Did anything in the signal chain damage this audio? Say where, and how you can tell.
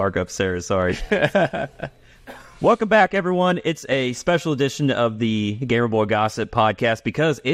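No, nothing in the signal chain stood out as having damaged this audio on listening.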